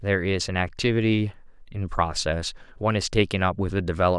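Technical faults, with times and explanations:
No technical faults are audible; the speech signal holds steady and intact throughout.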